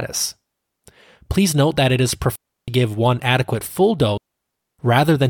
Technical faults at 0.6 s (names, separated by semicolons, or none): none